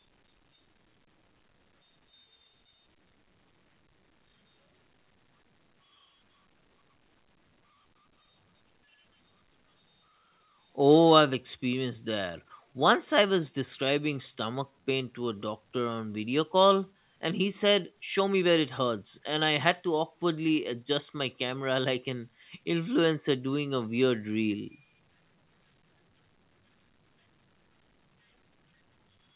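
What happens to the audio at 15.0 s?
At 15.0 s the speech is dragging: it runs slower than normal at an unchanged pitch, with drawn-out sounds, from 13.94 s until 15.36 s, just before "doctor on video call". This is a jitter buffer slow-down. With its reserve running low, the receiver repeated single pitch periods and bits of pauses back to back, stretching the audio by 104 ms to about 93% speed. The call's G.711 A-law band, with nothing above 4 kHz, is unchanged throughout.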